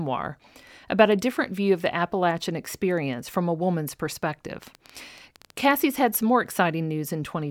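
From about 4.63 to 5.72 s there's a train of clicks: around fifteen sharp, same-shaped ticks at roughly 11 per second, spaced unevenly and poking a few dB above the speech, just before "had some more". Likely interference or a faulty connection injecting pulses.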